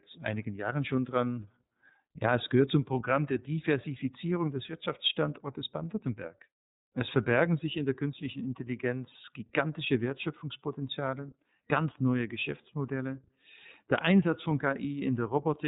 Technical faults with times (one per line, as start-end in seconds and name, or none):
0.00-15.68 iLBC codec